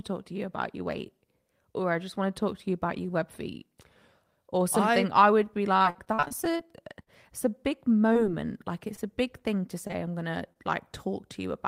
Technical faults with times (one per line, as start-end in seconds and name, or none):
5.77-6.61 repeated packet loss (robotic sound)
7.03-7.09 short stall from a late packet
8.13-8.17 short concealed packet loss
8.95-8.99 short concealed packet loss
9.87-9.91 short concealed packet loss
10.53-10.57 short concealed packet loss